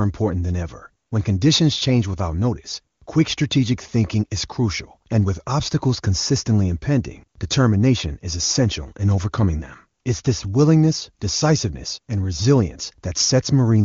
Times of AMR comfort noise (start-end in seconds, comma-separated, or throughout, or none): 1.05-1.11, 2.95-3.07, 10.01-10.05